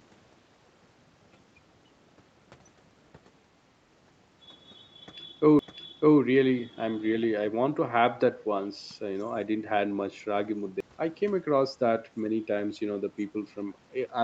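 At 5.59 s and 10.80 s, CD skips occur. The laser jumped between turns of the spiral. Each brings a tiny mute, a tick, and a sudden jump in the speech.

From 7.22 to 7.26 s, a faint scrap of speech returns 450 ms late, well below the main level. The likely cause is an echo leak past an echo canceller.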